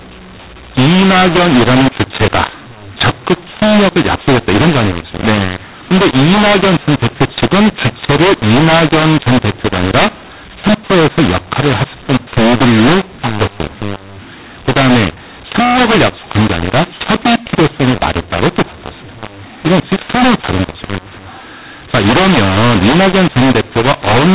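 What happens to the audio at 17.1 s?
At 17.1 s the speech is harsh and gritty, with levels that jump unnaturally and a noisy hiss where quiet stretches should be. This is the mu-law and A-law mix-up, present for the whole clip. Telephone audio encoded with mu-law G.711 at 8,000 samples a second is being decoded as A-law, so each 8-bit code maps to the wrong amplitude. Some samples come out too loud, others too soft, and near-silent ones are lifted into audible noise.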